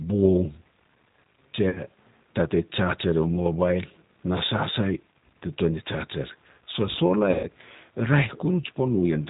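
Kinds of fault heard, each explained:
G.729 codec: The whole clip has the narrow, slightly rough, synthetic quality of a low-rate CELP coder, which points to 8 kbit/s G.729 (the Annex A variant). It models the voice with a vocal tract filter, a pitch predictor and a few pulses per 5 ms subframe, so the fine detail between harmonics is lost. Nothing above 4 kHz gets through, which gives that boxed-in telephone sound, and the coding damage is plainly audible.
VoIP packet loss concealed by the speech codec: There are two dropouts, at 1.69 to 1.80 s and 7.31 to 7.46 s. In each one the decoder keeps going on its last pitch and filter settings while lowering the gain, so the voice is stretched into a tone or coloured noise that fades. The first covers about 60 ms of missing audio, which fits roughly three lost packets. The second is about 120 ms, which fits around six. The sound stays weak or distorted briefly after each gap.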